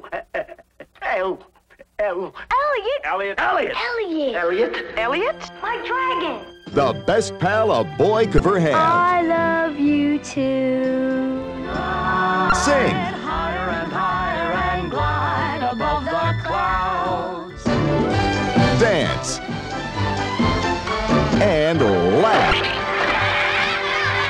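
At 8.36 to 8.40 s, 12.49 to 12.52 s and 22.49 to 22.53 s, damaged data in a compressed stream produces brief glitches, each about 34 ms long. Corrupted bytes make the decoder misread those frames and lose sync until it finds the next valid frame header.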